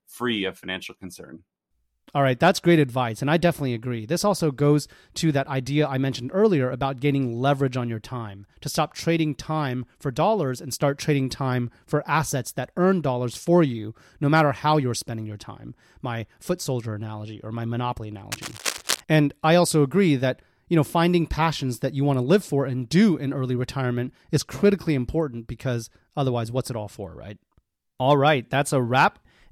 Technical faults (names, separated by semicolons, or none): cable scratch noise